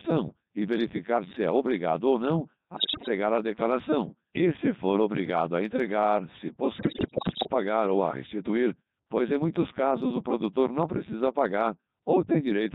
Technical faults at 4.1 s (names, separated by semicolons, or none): Codec 2 vocoder